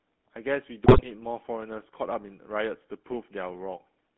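From the start, the whole clip carries the GSM full-rate codec sound. The speech sits in a narrow telephone band, roughly 200 Hz to 3.4 kHz, with nothing above it. The codec rebuilds the voice from a vocal tract model driven by a coarse, regularly spaced pulse train. That thinned excitation gives a clear buzzy, gravelly roughness. The damage is plainly audible and fits the 13 kbps full-rate coder.

At 0.84 s, GSM bit errors break in and last until 1.06 s. Corrupted bits reached the decoder, and the filter, pitch and gain values for those frames came out wrong. The spectrum twists and the level jumps from frame to frame. The voice turns into squawks, pops and gargling for about a fifth of a second. This fits roughly ten damaged frames and an error rate near 4 percent.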